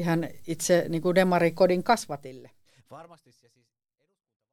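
Nothing stood out on listening to this speech clip, and the smooth fade-out over roughly its last two and a half seconds ends without any click or hard edge.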